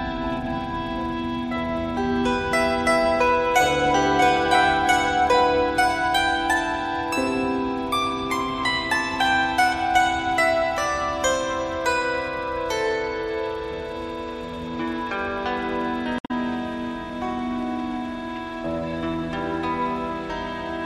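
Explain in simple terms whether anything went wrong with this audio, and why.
At about 16.16 to 16.31 seconds there is a brief chirp or blip that cuts through the sound. This is damaged data in a compressed stream: part of the file was corrupted, so the decoder misread it and had to search for valid data again.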